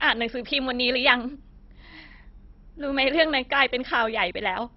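Throughout the speech, the sound is dull, with nothing above about 5.6 kHz, and it carries a gurgling, granular roughness. The likely cause is heavy MP2 compression at a bitrate near 32 kbps, starving its sub-bands so upper bands drop out and the remainder is coarsely quantised. A plain low-pass would leave no grit.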